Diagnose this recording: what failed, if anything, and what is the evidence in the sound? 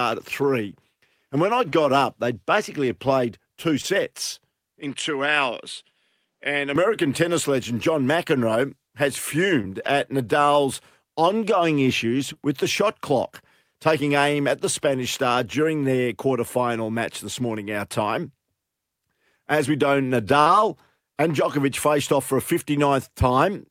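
Two brief smears, at 1.69 s after "when I" and 3.81 s after "basically had played two": short concealed packet loss on the network, each 20 ms gap filled by extending the preceding sound.

From 4.80 to 6.76 s, just before "tennis legend", the audio dulls with nothing above 11 kHz, drops about 5 dB and gains new background noise: likely an input switched to a poorer device.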